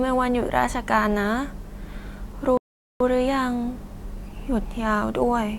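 At 2.57 s the speech drops to silence for about 0.43 s, a rebuffering stall: the player ran dry, waited, then picked up exactly where it left off.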